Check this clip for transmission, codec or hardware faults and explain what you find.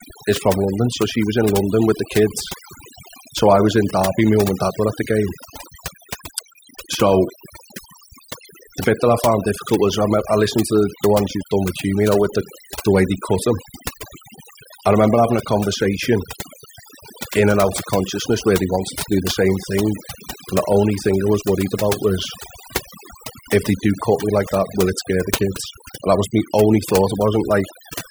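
The one problem here is overdone noise removal, and it runs through the whole clip. A noise reduction stage was pushed too hard on a noisy speech recording, so any frequency band sitting close to its noise estimate gets pulled way down or switched off. The quieter parts of the speech get caught in that too. You hear it as a background that drops away and breaks up into twinkly little specks.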